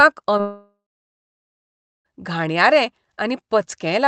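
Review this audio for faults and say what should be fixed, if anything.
Short concealed packet loss at 0.37 to 0.41 s: about 20 ms arrived too late, so the decoder extended the preceding sound, leaving a brief smear.

Long network dropout from 0.41 to 2.07 s: a fading continuation gives way to about 1.26 s of silence, and the sound resumes with 1.64 s missing, likely lost in transit.

To prevent both, stabilise the network link and enable Opus in-band forward error correction with a somewhat deeper jitter buffer.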